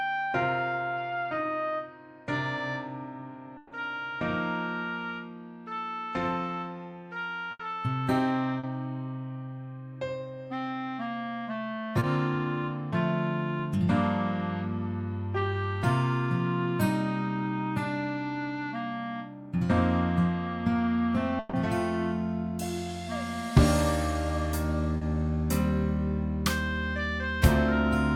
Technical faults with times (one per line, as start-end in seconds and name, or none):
3.57-3.73 burst of packet loss
7.51-7.61 burst of packet loss
8.59-8.65 short concealed packet loss
11.99-12.03 short concealed packet loss
21.39-21.55 burst of packet loss
24.97-25.03 short concealed packet loss